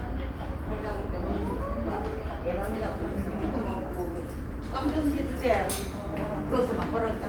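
Sounds, with no technical faults heard anywhere.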